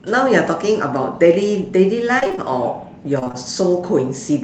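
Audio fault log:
2.19–2.39 s: repeated packet loss (robotic sound). Five quick dropouts, the longest about 23 ms. The receiver fills each hole by stretching the last bit of sound, and about half of this stretch ends up patched that way, so it comes out choppy.
3.19–3.35 s: repeated packet loss (robotic sound) again. Four gaps, the longest 24 ms, half the span concealed, so you get the same robotic stutter over the call codec's band, which tops out at 8 kHz.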